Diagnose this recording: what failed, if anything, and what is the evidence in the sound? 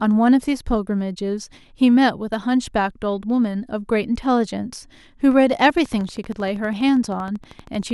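From 5.62 s to 7.92 s there's a train of clicks, evenly spaced at 12.7 per second, about thirty in all, peaking roughly as loud as the speech and ticking through the pauses too. Most likely interference from nearby equipment getting into the analogue wiring.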